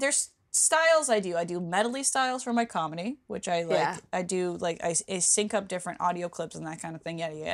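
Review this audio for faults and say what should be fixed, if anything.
No faults; nothing needs fixing.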